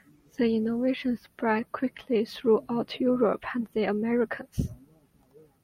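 No faults are audible in this speech recording; it runs without a dropout, glitch or other defect at any point.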